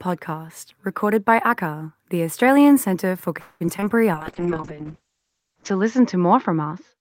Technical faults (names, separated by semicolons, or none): call audio freeze; short concealed packet loss; call bitrate drop